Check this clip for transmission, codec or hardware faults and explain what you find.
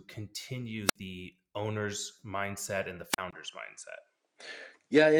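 Two kinds of trouble show up here: a pair of wireless microphone squelch dropouts, and a late shift that sounds like the input switching to a poorer device.

The squelch dropouts land at 0.85–0.96 s and 3.11–3.18 s. The FM radio link fades far enough that the receiver's squelch kills the output outright, so you get a quick swell of hiss, a dead hole of about 60 ms the first time and about 37 ms the second, then the speech snapping back.

From 3.31 s to the end, the character of the speech changes. There's a 20 ms gap, then nothing comes through above 10.5 kHz, so it turns duller and boxier at roughly the same loudness, with a new noise floor sitting around 50 dB down. The likely cause is the system swapping mid-recording to a different, narrower-band microphone or headset input, which brings its own tone and background noise.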